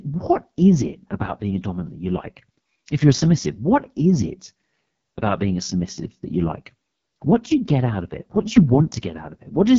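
From start to finish the speech sounds rough and raspy, with heavy coding damage and nothing above 7.2 kHz. This is the AMR wideband (HD Voice) codec at its lowest mode, which fits 6.6 kbit/s, too coarse to model the vocal tract cleanly.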